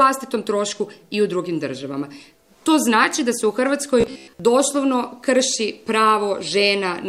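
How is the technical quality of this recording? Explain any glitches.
One glitch stands out. From 4.01 to 4.41 s the sound turns into a rigid, metallic buzz at about 66.8 Hz, robotic sound from repeated short buffers. The likely cause is audio arriving too seldom, so a roughly 15 ms fragment is looped over most of that stretch while the real audio is skipped, imposing a buzz at the loop rate.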